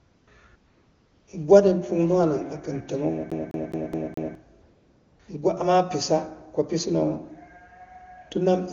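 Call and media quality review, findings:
AMR comfort noise at 0.00–0.27 s, 0.55–1.27 s and 4.61–5.19 s. Real background swapped for a smooth, steady hiss that switches in and out. Sender's voice activity detection stopped speech frames; receiver synthesised noise from a coarse level-and-spectrum description.

CD stuck on one turn, 3.30–4.35 s. A 210 ms slice replays five times, with a brief mute at each jump, giving an even, rapid stutter. Probable component: disc playback in the source chain. A scratch sends the laser back one track per revolution.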